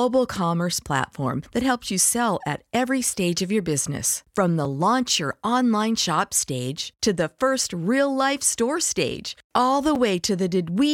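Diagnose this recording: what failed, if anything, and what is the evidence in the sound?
Block of digital silence at 4.65 s and 9.95 s: the speech drops abruptly to silence for 2.9 ms, then 5.8 ms, heard as ticks. The driver or buffer stage likely missed its deadline, and the gaps fit unfilled 128- and 256-sample output blocks.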